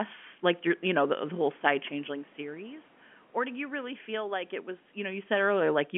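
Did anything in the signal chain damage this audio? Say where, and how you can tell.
No, nothing in the chain damaged this speech: the level shifts near 1.5 s and 5 s sound like the talker moving relative to the microphone, the background noise belongs to the room, and the 200 Hz to 3.4 kHz telephone band is simply the line's normal limit.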